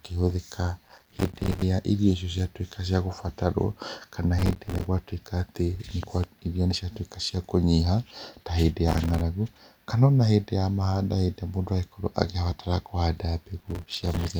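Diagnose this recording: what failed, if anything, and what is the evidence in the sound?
The driver/buffer stage is where this one broke: there's processor overload crackle in four bursts, at 0.87–1.62 s, 4.39–4.86 s (right before "gwatuĩka atĩ"), 8.88–9.21 s (right after "cia kũnyiha ta hĩndĩ") and 13.58–14.29 s. Each burst is a gritty tearing over the speech, made of dozens of tiny silent holes with hard edges. That's the audio thread missing deadline after deadline on very short buffers, around 3 ms each, and dropping each late block to silence until the load eases.

There's also a loud pop at 6.03–6.26 s, just after "gwatuĩka atĩ". It's actually two sharp pops in quick succession, peaking about 5 dB above the speech, and the speech carries on underneath without a break. That points to a sudden voltage step landing on the signal and getting shaped by the downstream circuitry, most likely a transient from a connector, switch or static discharge in the analogue wiring.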